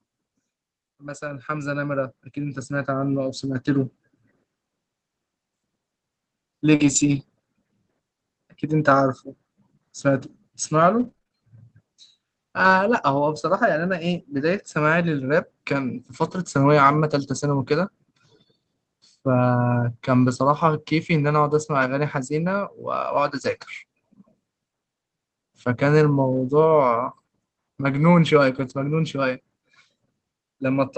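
A speech clip carried over an Opus call at 24 kbps, whose spectrum stops at about 8 kHz. From 0.97 to 3.95 s, automatic gain rising lifts the level by about 12 dB as the gain control reacts to a quiet input. Voice and background noise swell together, and the waveform envelope and the spectrogram's noise floor both climb steadily over those three seconds. At 6.75 to 6.82 s, a short concealed packet loss leaves about 40 ms that never arrived. The decoder stretches the preceding sound to cover it, which shows as a smeared, repeated texture in the spectrogram and is heard as a brief wobble. Straight after, from 6.80 to 7.22 s, a lost packet rebuilt from error correction spans about 220 ms, which fits eleven 20 ms packets recovered from low-bitrate copies. There is no gap, but harmonics look blurred and grainier, and the sound is rougher. The same rebuilding recurs at 26.32 to 26.38 s (about 40 ms) and 28.58 to 28.76 s (about 100 ms), each briefly coarser. 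Between 11.0 and 17.14 s come scattered short gaps, roughly five, the longest around 30 ms. Each is patched by continuing the last sound, leaving small ticks and smears visible as thin vertical discontinuities in the waveform.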